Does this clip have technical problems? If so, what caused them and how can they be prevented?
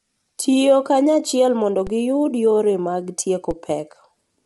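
Yes. The speech sounds rough and grainy throughout, with nothing above about 11.7 kHz, likely from low-delay AAC compression (AAC-ELD) at a low bitrate around 32 kbps. Giving the codec more bitrate or using a higher-quality codec would keep this from happening.

There's a DC step at 1.87 s, between "kanyachiel mondo" and "giyud yore mag", and another at 3.51 s, just after "mondo giyud yore mag". Each is a low thump where the waveform's zero line jumps and then dies away, the way a 20 Hz high-pass lets an offset decay. Fixing the offset at the converter or input, or avoiding switching in offset inputs mid-recording, would prevent it.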